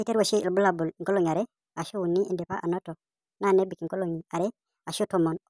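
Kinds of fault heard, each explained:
Wrong sample rate: The speech runs about 1.38 times too fast and sits roughly 5.5 semitones too high, which fits audio captured at 16 kHz being played out at 22 kHz with no rate conversion. Pitch, tempo and vocal resonances all shift together by the same ratio, giving a hurried, chipmunk quality throughout. A pitch shifter or time-stretch would move only one of these, and would leave warbling or smearing that this clip lacks.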